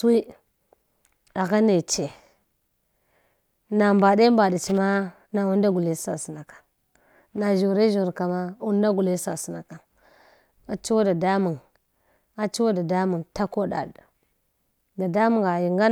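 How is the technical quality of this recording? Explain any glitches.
The technical quality of the recording is sound, with no glitches to explain.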